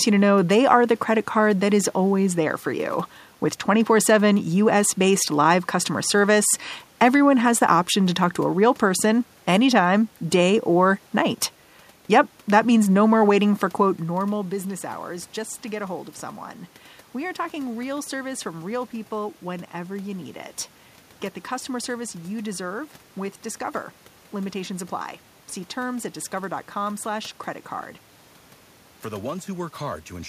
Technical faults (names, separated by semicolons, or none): none